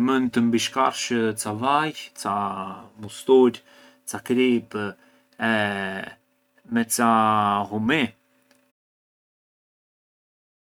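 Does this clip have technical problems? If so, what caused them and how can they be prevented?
No, nothing stood out on listening to this speech clip, and the smooth fade-out that begins around 8.5 s and finishes at 8.72 s is an ordinary edit rather than a problem.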